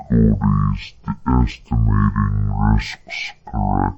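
Throughout, the speech suffers from stereo read as mono: interleaved left and right samples are played back as one channel, so everything runs at half speed and an octave low. A spectrogram shows compressed harmonics plus a fainter mirrored copy in the upper half.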